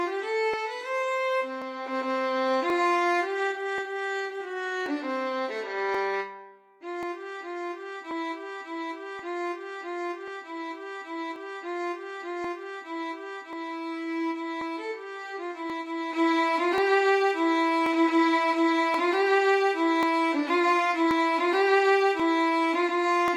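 Clock drift buffer slips run from 0.54 s to 23.28 s: a click or pop recurs about every 1.08 s, roughly twenty times in all, with clockwork regularity. The likely cause is two devices running on separate clocks that disagree by something near 700 ppm, so the buffer between them steadily drifts until a short block, on the order of a few tens of samples, is dropped or repeated, leaving a discontinuity in the audio.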